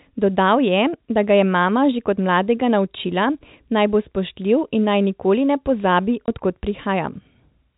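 At 6.26 s, between "naj nikoli ne pozabi" and "od kod", the speech drops out for 20 ms due to packet loss filled with silence, which fits one lost packet. The gap has abrupt edges, and the telephone-band G.711 sound resumes immediately after.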